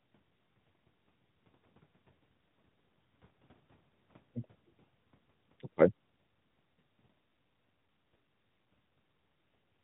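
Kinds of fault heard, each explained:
No kinds of fault are heard in this speech clip, so there are none to explain.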